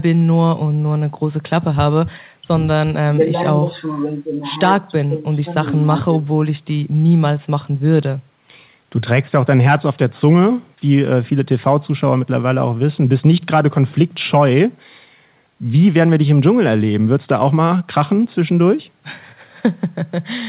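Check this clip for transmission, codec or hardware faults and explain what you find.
No transmission, codec or hardware faults can be heard in the speech. It comes through a call path working normally, with nothing above 4 kHz, which fits narrowband G.711 mu-law telephone coding.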